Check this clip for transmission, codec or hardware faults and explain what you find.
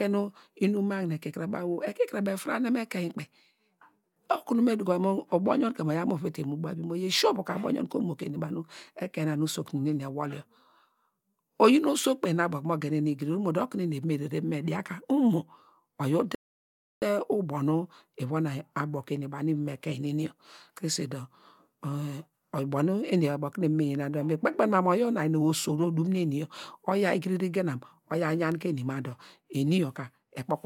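One fault is present. A rebuffering stall at 16.35 to 17.02 s: playback ran out of downloaded audio and paused until more arrived, so the speech drops to silence for 0.67 s, then resumes exactly where it stopped.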